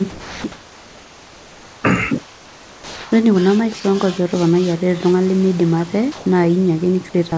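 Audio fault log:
0.10–0.44 s and 3.80–3.84 s, sound dropped by the voice detector: speech briefly gives way to a steady, featureless hiss, with about 260 ms of sound lost in the first spot and about 20 ms in the second, then returns. The sender's voice detector likely mistook quiet speech for background and stopped sending, so the receiver filled the gap with comfort noise.
0.52–1.84 s, 2.24–3.12 s and 6.12–6.26 s, comfort noise in place of the background: in these pauses the real room background turns smooth and detail-free. It is about 2 dB quieter in the first two and about 2 dB louder in the last. The sender likely stopped transmitting during silence, and the receiver synthesised noise roughly shaped like the background.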